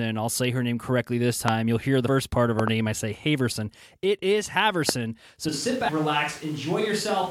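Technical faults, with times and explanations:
1.48–1.50 s, 2.59–2.70 s, 4.89–4.91 s: loud pop. Sharp transients about 20 dB above the speech, the second a double pop nearer 15 dB, after "part of", likely from a voltage spike.
2.07 s and 5.88 s: damaged data in a compressed stream. Brief glitches, the first between "hear the" and "part of", where the decoder lost frame sync.
5.49 s to end: switch to a distant microphone. Speech abruptly turns hollow and roomy, level drops about 5 dB, and room noise rises, likely because the close microphone's signal dropped out.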